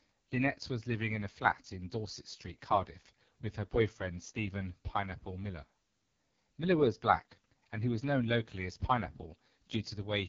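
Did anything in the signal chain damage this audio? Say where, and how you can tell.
Yes, at the codec: AMR wideband (HD Voice) coding throughout, with raspy speech and nothing above 7.1 kHz. The heavy roughness, unlike a clean low-pass, points to its lowest rate, 6.6 kbit/s.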